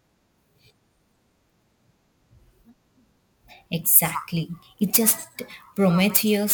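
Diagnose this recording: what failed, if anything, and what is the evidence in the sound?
Crude rate conversion from 4.05 s to the end: a gritty, inharmonic fizz rides the speech, following its louder and brighter sounds, with error energy only about 10 dB down. Samples were dropped or repeated without filtering, which fits a 48 kHz to 44.1 kHz conversion.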